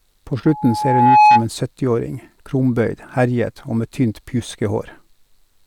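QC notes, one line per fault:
0.45 to 1.45 s, loudspeaker feedback squeal. A pure tone at 846 Hz rises out of the speech. It swells over roughly 0.7 s and peaks around 10 dB above the voice. The microphone is hearing its own loudspeaker. At 846 Hz the loop gain tops one, so each pass round the loop makes that tone louder. The squeal ends at 1.45 s.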